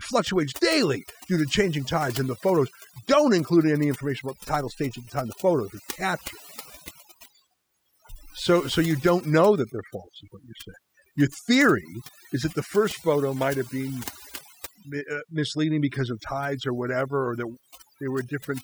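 Overdone noise removal runs throughout this speech. Frequency bands near the noise estimate are cut hard, leaving twinkling specks in near-silence and taking quiet parts of the voice with them.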